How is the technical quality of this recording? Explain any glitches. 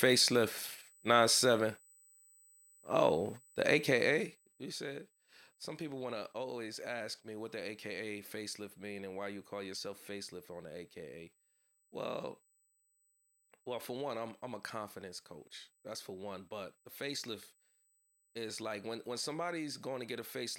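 There are two technical problems here: a steady high-pitched whine under the whole recording and a short burst of zipper noise near the four-second mark.

The whine is USB whine, a fixed tone at 8 kHz that sits about 35 dB below the speech and runs from start to finish. USB audio hardware draws power in 125-microsecond microframes, and that 8 kHz pulsing leaks into the analogue side through the power supply or ground. The result is a thin, constant whistle.

The zipper noise runs from about 3.84 to 4.78 s, while the level drops by around 15 dB. Instead of gliding down, the gain moves in 1 dB jumps at roughly ten steps a second with no smoothing between them. Each jump puts a tiny discontinuity into the waveform, so you hear a fast ticking or zipping riding on the speech for that second or so.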